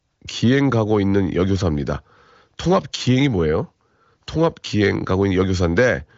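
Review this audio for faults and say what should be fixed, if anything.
Nothing in this audio needs to be fixed, as no faults turn up in it.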